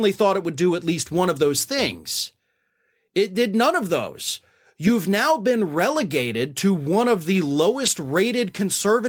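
At 5.77 s there is a lost packet rebuilt from error correction. A 20 ms stretch of the speech is played from the low-bitrate backup copy carried in the next packet, which fits a single lost packet. So there is no gap, just a brief rough, noisy grain. On a waveform the signal stays continuous. On a spectrogram the frame shows as a short, smeared column with less distinct harmonic detail than its neighbours.

From 7.06 s to 9.06 s a USB whine runs under the speech. It is a steady 1 kHz tone, quiet at roughly 40 dB below the signal, caused by the bus's 1 ms frame activity leaking into the audio path through power or ground. It sounds like a faint, fixed-pitch whistle, clearest in pauses. A spectrogram shows a thin, unwavering horizontal line at 1 kHz across those two seconds.

At 7.85 s, inside the whine, a second lost packet is rebuilt from error correction. Again 20 ms of speech is replaced by the coarser backup copy, heard as a momentary roughening rather than a dropout. 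It leaves the same brief smeared slice on the spectrogram.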